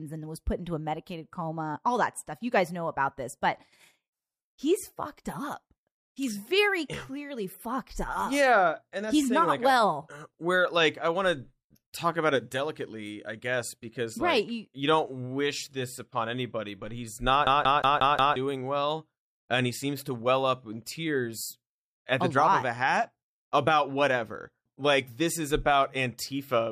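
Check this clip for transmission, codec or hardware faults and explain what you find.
One hardware fault is audible in this speech. From 17.47 to 18.36 s, after "upon anybody but he's", the CD is stuck on one turn. A scratch throws the laser back, repeating a 179 ms slice five times with brief mutes, until "well and he seems" resumes. The short silence at each jump separates it from a seamless buffer loop.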